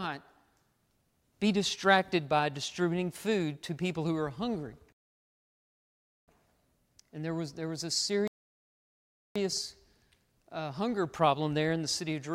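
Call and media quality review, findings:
Rebuffering stall, speech, 4.93–6.28 s: playback drops to silence, then resumes at the exact point it stopped. No audio lost, about 1.35 s added. Player buffer underrun: download fell behind, playback halted until data arrived.

Rebuffering stall, 8.28–9.36 s: same symptom, about 1.08 s of silence inserted, continuity intact on resume. Points to the client player's buffer running dry again under insufficient delivery throughput.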